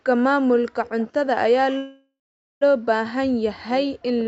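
From 0.85 to 1.08 s a faint delayed copy of the speech trails the original by about 166 ms, sitting roughly 20 dB below it. This is an echo leak, likely from a loudspeaker whose echo canceller let part of the microphone pickup through and sent it back. On a spectrogram the same harmonic pattern appears twice, the second copy fainter and shifted right by about a sixth of a second. On the waveform a low-level smear fills what should be the tail.

At 1.77 s the speech stops and the last sound is stretched into a fading buzz. It then drops to near silence for about 460 ms, and at 2.63 s the speech resumes exactly where it left off. This is a call audio freeze, with the full 838 ms being an inserted gap. Its likely cause is delayed packets draining the jitter buffer, with the receiver concealing until they arrived. A spectrogram shows smeared, decaying horizontal bands followed by a blank stretch. 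The waveform flattens and then restarts, with nothing cut from the speech itself.

From 3.61 s to the end at 4.28 s the speech is pushed down, dipping by around 40 dB at its deepest. This is speech suppressed in double talk, likely because both sides spoke at once and the echo canceller attenuated the near talker along with the echo. On the waveform the envelope sinks. On the spectrogram the speech energy weakens, below the 8 kHz ceiling the Opus call path imposes throughout.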